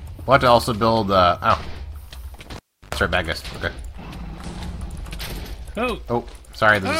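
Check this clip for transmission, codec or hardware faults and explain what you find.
There's one hardware fault here: a cable pulled and plugged back in, from 2.56 to 2.95 s. A pop cuts the sound, then about 337 ms unplugged, near silent apart from roughly 97 ms of 50 Hz mains buzz while the plug tip makes partial contact, before seating fully with a second pop.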